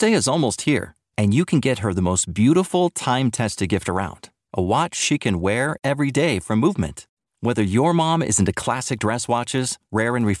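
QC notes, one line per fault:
8.23–10.4 s, after "your mom": resampler restarted on every block. The 48 kHz to 24 kHz conversion handles each 10 ms block in isolation, so every block edge lacks its real neighbouring samples and carries a small error. These errors repeat at 100 Hz, giving a buzz over the speech.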